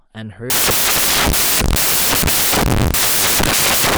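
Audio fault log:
0.5 to 3.98 s, samples built from the wrong bytes: At 0.5 s the speech gives way to loud, harsh broadband noise that runs to the end of the clip. The reader is putting each sample's bytes together wrongly, as if off by a byte or with the byte order swapped. The fast-changing low bits then land in the high part of each value. So the samples become large and erratic, heard as loud, harsh broadband noise.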